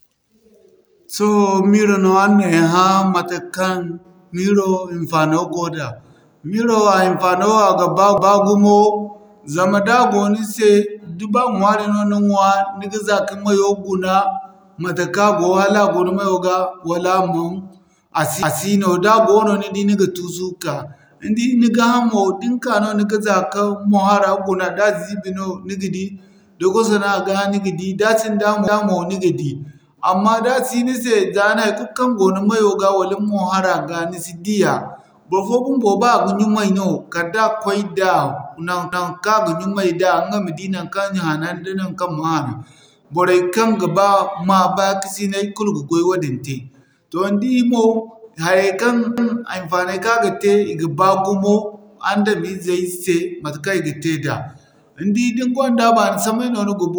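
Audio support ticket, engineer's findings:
Overlapping chunks: 250 ms of speech replays at 8.18, 18.43, 28.68, 38.93 and 49.18 s, every 10 s chunk. Spectrogram shows duplicated onsets and a vertical seam at each join.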